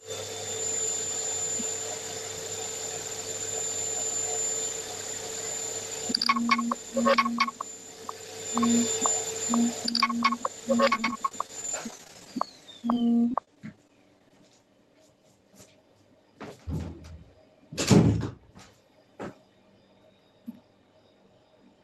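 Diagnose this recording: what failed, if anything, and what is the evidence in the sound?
Repeated packet loss (robotic sound) at the network stage runs from 10.91 to 14.31 s: dozens of brief holes, none longer than 33 ms, each bridged by stretching the preceding sound, so about 12% is concealed and the audio turns choppy. Unlike a buffer underrun, the gaps are filled rather than silent or clicking.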